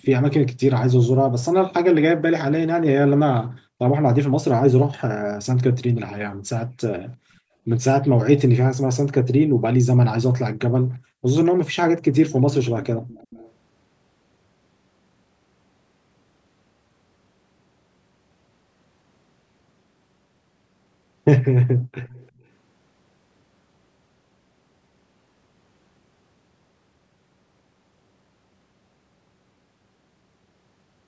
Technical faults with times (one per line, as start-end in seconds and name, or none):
13.08-13.52 echo leak
21.63-22.29 echo leak
22.32-22.43 background gated by the echo canceller